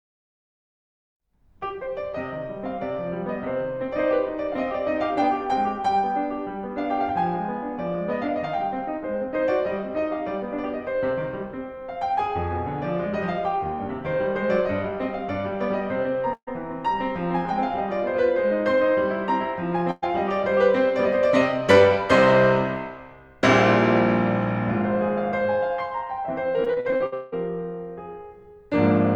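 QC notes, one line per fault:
16.33–16.49 s and 19.91–20.04 s, burst of packet loss: The music cuts out for about 140 ms, then 120 ms. The receiver stretches the last sound and fades it, reaching silence for about 70 ms in the first gap. Playback resumes later, with material skipped.
26.64–27.34 s, repeated packet loss (robotic sound): Seven gaps hit in quick succession, about 380 ms lost in all, the longest 180 ms. Over half this span is patched by repeating the last sound. The music turns choppy, with pieces missing.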